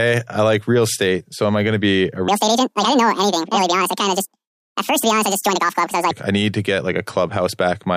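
From 2.28 s to 6.11 s, right after "be a", the speech turns abruptly high and hurried, running at 1.9 times its proper rate and sitting around ten semitones sharp. This section at the wrong speed is likely from playback or editing against a mismatched clock.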